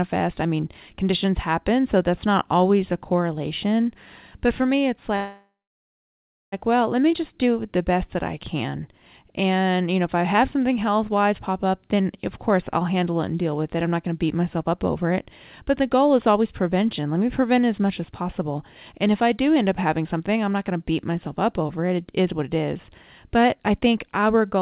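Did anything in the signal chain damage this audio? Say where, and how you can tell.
Yes. At 5.16 s the speech stops and the last sound continues as a buzz or hiss that fades for about a third of a second. It then drops to silence for roughly a second, and the audio resumes at 6.54 s exactly where it halted. This is a call audio freeze, placing the fault at the network stage. Packets were likely held up in transit, so the jitter buffer ran empty and the receiver filled about 1.36 s. Nothing is lost, but the rest of the audio now arrives later by that amount.

From 13.75 to 15.25 s, 15.70 to 16.39 s, 18.12 to 22.88 s and 23.29 to 24.60 s the speech runs faster while its pitch stays unchanged. That is jitter buffer speed-up in the call processing. The buffer was holding more than its target, so it repeatedly trimmed pieces one or a few pitch periods long. Playback ran at 108%, 104%, 107% and 110% speed, removing somewhat over half a second in total. 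The band limit at 4 kHz is the normal ceiling of the G.711 call codec.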